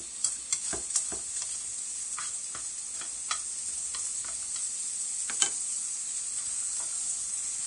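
From start to finish the treble turns hissy and grainy, with nothing above 10.6 kHz, roughened tones and smeared attacks. That's likely Vorbis compression pushed hard. The fine high detail is quantised into noise, and the heavy damage points to a low bitrate around 33 kbps.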